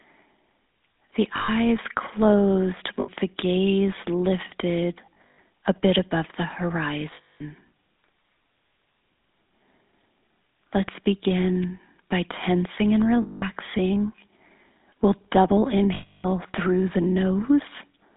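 GSM full-rate codec coding runs throughout. Its pulse-driven vocal-tract model leaves a buzzy, gravelly roughness, with the line limited to roughly 150 Hz to 3.7 kHz.

Lost GSM frames come at 1.36 s, lasting about 0.13 s. The missing audio is rebuilt by repeating the settings of the last good frame, so the sound freezes into a rough metallic ring.

The same fault recurs at 3.00 s, just before "the gaze lifted", for about 0.09 s. At 5.06 to 5.39 s, between "the gaze lifted" and "a bit above the", short losses are scattered, the longest lasting about a tenth of a second. Longer holds follow at 7.14 to 7.42 s and at 13.22 to 13.44 s. The last is at 15.94 to 16.26 s, before "through the", where about 0.3 s of ringing is held.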